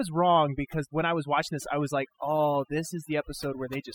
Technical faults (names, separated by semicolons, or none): overdone noise removal